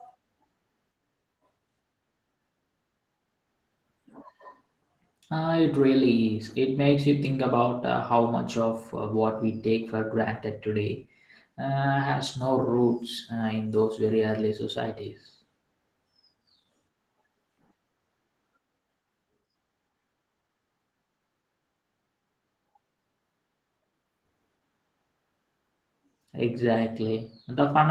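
From start to finish the speech carries Opus voice compression artefacts, plainly audible throughout. The codec appears to be running in hybrid mode: a linear-prediction coder handles the band below 8 kHz while a transform layer supplies the top end. The full audio band is retained, but at what sounds like a rate around 16 kbps the excitation is coded coarsely, giving the voice a rough, slightly synthetic texture.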